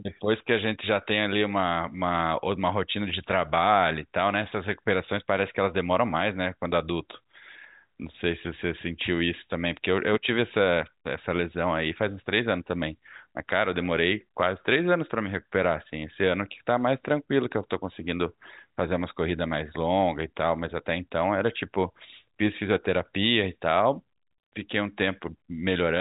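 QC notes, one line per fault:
No fault to note in these QC notes.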